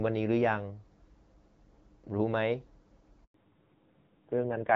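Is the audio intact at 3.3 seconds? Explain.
No. At 3.3 seconds the sound falls inside a handover gap running from 3.24 to 3.34 s. As the call is passed from one network to another, no speech frames reach the receiver for about 100 ms, so the sound dies away within a few tens of milliseconds and stays silent until the new link takes over. On a waveform this shows as a flat, near-zero stretch about 100 ms wide. On a spectrogram it is a blank vertical band across all frequencies.

Right after the gap, from 3.34 s to the end, there is a fallback to narrowband. The call leaves HD Voice wideband coding, which before this point carries speech up to about 7 kHz with only light codec damage, and drops to an older narrowband codec. Everything above 4 kHz disappears, and the sound turns duller and rougher. The roughness fits a low-rate narrowband mode of around 5.9 kbit/s. On a spectrogram the energy above 4 kHz stops abruptly at 3.34 s, leaving a hard horizontal ceiling at 4 kHz for the rest of the clip.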